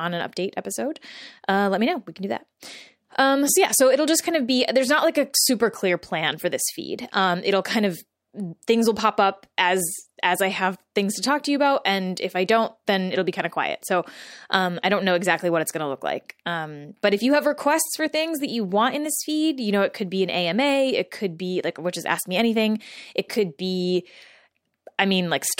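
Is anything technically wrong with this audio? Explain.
No, nothing is technically wrong with this audio.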